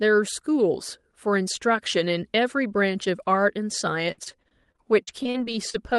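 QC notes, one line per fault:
4.11–5.97 s, repeated packet loss (robotic sound). Near the end of the clip the speech turns choppy. Packets went missing or arrived late in quick succession, about 18 holes in under two seconds. Each hole was patched by stretching the last good sound forward. The patches cover roughly a fifth of the span, and the longest gap is 63 ms. Some pieces are simply absent. The call codec underneath, which fits Opus at a moderate bitrate, tops out near 12 kHz.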